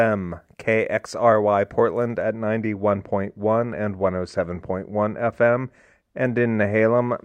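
From about 2.22 s to the end, the speech turns dull and muffled, as if a blanket had been laid over it: sibilants soften and the crisp top end fades, with the treble rolling off smoothly to about 8 dB down at 10 kHz relative to 1 kHz. This is de-emphasis applied wrongly, a treble cut meant to reverse pre-emphasis, applied here to audio that had none or applied a second time.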